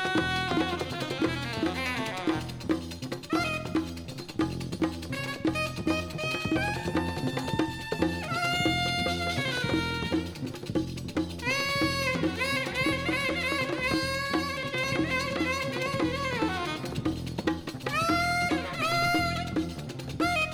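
No technical faults can be heard anywhere in it.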